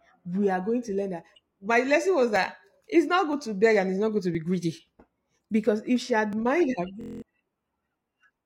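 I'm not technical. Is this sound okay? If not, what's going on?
No. The audio has two kinds of fault.

The first is an overlap between stream segments. The audio arrives in one-second pieces, and the timing labels on neighbouring pieces overlap slightly. The player trims that overlap away, even though nothing was actually repeated. About 40 milliseconds of real sound disappears each time, and the sound jumps with a small click or skip. This happens roughly once a second: at 1.35, 2.36, 3.33, 4.35, 5.36, 6.33 and 7.34 seconds.

The second is a system hang loop, from 7.01 to 7.22 seconds. The computer briefly froze, but the sound hardware kept replaying the last tiny chunk of audio it held. That chunk is about 23 milliseconds long, which fits a 1024-sample buffer. It repeats nine times, about 43 times per second. You hear a short, steady buzz instead of the speech, and roughly a fifth of a second of the real audio is lost.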